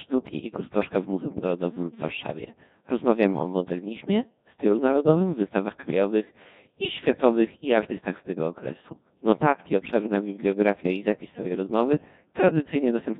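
From start to finish, the speech passes through the Codec 2 vocoder, at a rate that fits about 1.6 kbit/s. Only pitch, voicing, energy and envelope survive, and sine-wave resynthesis makes it heavily robotic and buzzy. A spectrogram shows unnaturally tidy harmonic stacks with smeared consonant noise.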